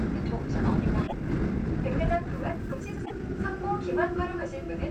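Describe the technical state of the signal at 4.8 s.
At 4.8 s the signal is intact, with no audible dropout, clipping, distortion or other fault at that point.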